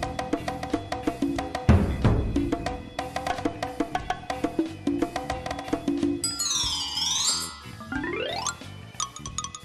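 No technical faults are audible.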